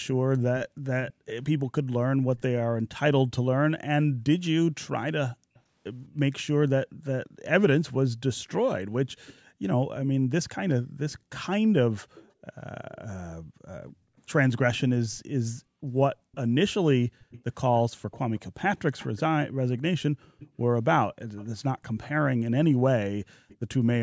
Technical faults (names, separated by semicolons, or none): echo leak; background gated by the echo canceller